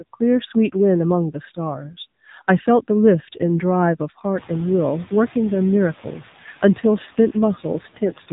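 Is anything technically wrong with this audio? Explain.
Yes. Throughout the speech the voice sounds plainly buzzy and synthetic, with nothing above about 3.8 kHz. This is AMR narrowband mobile codec damage: the codec rebuilds the voice from a vocal-tract model and sparse pulses, consistent with a low setting near 7.4 kbps. The room noise that rises by about 21 dB around 4.5 s, staying about 20 dB below the speech, belongs to the recording.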